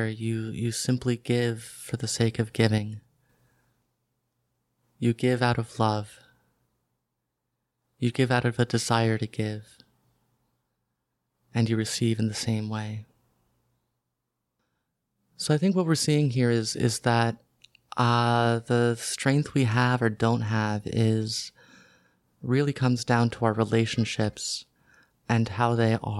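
At 2.78 s, just after "for the sake of", the speech drops by about 5 dB in a single step: a sudden gain jump. Voice and background noise fall together, with no fade. The likely cause is a gain change applied without a ramp. Level returns at 3.29 s.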